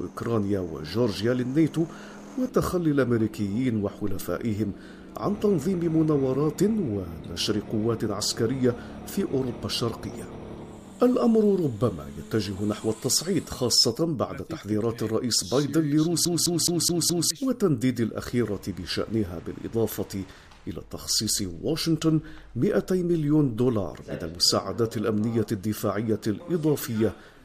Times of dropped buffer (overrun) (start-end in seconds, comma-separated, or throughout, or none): none